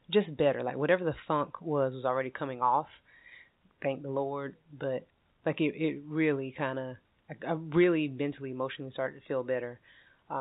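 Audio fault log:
Nothing stood out on listening to this speech, which comes through a telephone-style call path with no content above 4 kHz.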